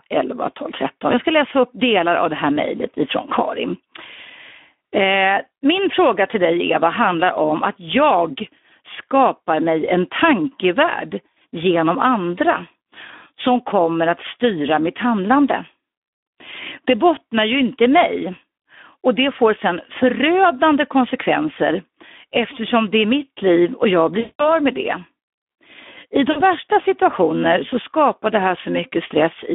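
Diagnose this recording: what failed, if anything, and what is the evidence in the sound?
The codec stage has failed throughout. This is Speex codec damage. The speech is hoarse and noisy, with plainly audible coding grain. It sits in a narrow 200 Hz to 3.5 kHz band. The sparse excitation fits a low Speex bitrate of around 11 kbps.

The network stage shows VoIP packet loss concealed by the speech codec. From 24.19 to 24.59 s, after "mitt liv och jag" and before "med det", about 200 ms is replaced by a fading extrapolation. A shorter 40 ms gap at 26.31 to 26.42 s precedes "värsta situationer så skapar". In each gap the decoder repeats its last pitch and filter at falling gain.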